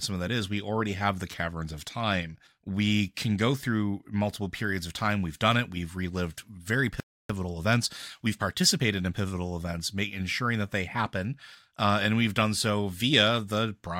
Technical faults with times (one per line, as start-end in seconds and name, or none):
7.00-7.30 playback stall
7.30-9.26 time-compressed catch-up